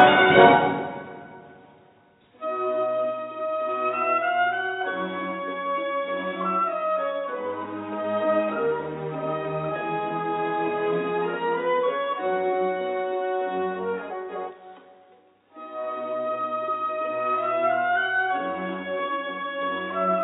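At 14.1 s, running to about 14.51 s, there's a frames-out-of-order glitch: two neighbouring blocks of roughly 186 ms each got swapped, which fits runs of four frames delivered in the wrong order and decoded as they came. You hear a quick garbled flutter, and no time goes missing. The same thing happens again from 19.07 to 19.47 s.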